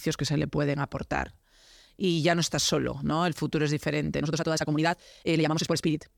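At 4.18 s, right after "futuro es", the speech jumps into a time-stretched section that runs to the end at 6.18 s, playing about 1.87 times faster while its pitch stays put. The delivery turns rushed, likely because software dropped short slices to shorten the passage. On a spectrogram the harmonics keep their spacing but the syllables crowd together. The waveform shows compressed envelopes with abrupt joins.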